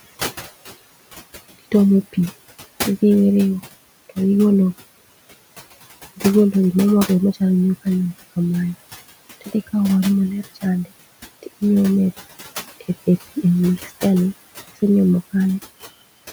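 Speech with noise suppressor artifacts throughout: the steady room noise, about 18 dB below the speech, is pulled down by about 14 dB between phrases and rises again under the voice.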